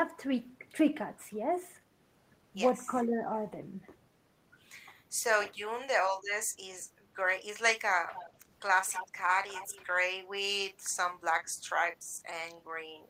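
Speech suppressed in double talk appears at 2.87 to 2.97 s as a slight dip in level, and at 5.55 to 5.62 s as a much deeper dip. Each lasts a tenth of a second or less and is most likely an echo canceller mistaking overlapping talk for loudspeaker echo and turning the voice down.

Echo leak follows at 8.08 to 8.3 s, 8.87 to 9.12 s and 9.48 to 9.85 s. A copy of the voice trails 240 ms behind, faint in the first and last bursts and nearly as loud as the speech in the middle one. Likely cause: a far-end canceller letting residual loudspeaker pickup return.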